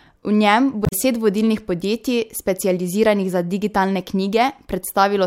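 A short glitch breaks into the speech from 0.82 to 0.93 s, about a tenth of a second where the sound should be continuous. This is damaged data in a compressed stream: some of the encoded bytes at that point were corrupted, so the decoder misread the affected frames, lost its place in the stream and resynchronised on the next valid frame header, after which the speech resumes.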